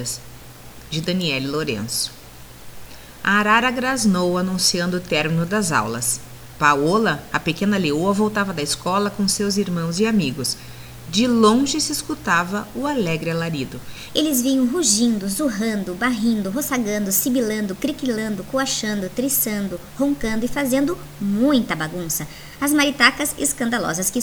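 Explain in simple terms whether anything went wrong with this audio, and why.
Something did go wrong, starting at 14.10 s and lasting to the end. From that point the sound plays about 1.19 times faster than it should. Because speed and pitch are tied together, everything also jumps up in pitch, by about three semitones. The last stretch sounds rushed and squeaky. This is a section at the wrong speed. The likely cause is that this part was played or edited using the wrong clock rate.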